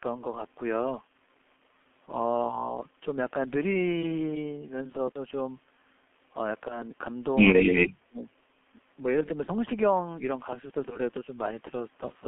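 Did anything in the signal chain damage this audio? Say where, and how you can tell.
Yes. At the codec stage, the G.723.1 codec at 6.3 kbit/s confines the speech to 200 Hz to 3.4 kHz throughout, so it sounds muffled and hoarse with smeared consonants.

At the network stage, VoIP packet loss concealed by the speech codec shows at 5.12–5.19 s and 9.44–9.51 s. Each time one 30 ms frame is missing, and the decoder fills the gap with a brief buzzy or noise-like extrapolation that fades.

At the call-processing stage, the speech drops by about 35 dB from 7.7 to 8.26 s, for roughly half a second. The likely cause is speech suppressed in double talk, with the echo canceller attenuating the talker while the far end was active.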